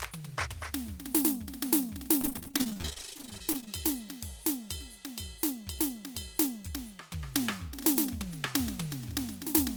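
From 2.21 to 3.68 s the music breaks into repeated packet loss (robotic sound): dozens of short holes, none longer than 28 ms, are patched by stretching the preceding sound, so about 43% of that span is filler. Unlike a single dropout, the rapid recurrence gives a choppy sound with pieces missing.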